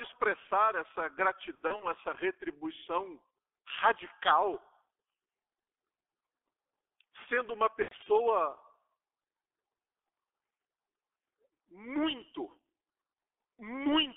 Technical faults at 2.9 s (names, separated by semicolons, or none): G.723.1 codec